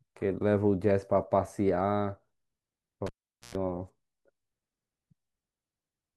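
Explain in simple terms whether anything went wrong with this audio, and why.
At 3.07 s the speech is cut by a cable pulled and plugged in: a pop, about 0.44 s of near silence, a short 60 Hz mains buzz lasting about 0.11 s, then another pop at 3.55 s as sound returns. The buzz and pops show a physical cable fault, not a digital dropout.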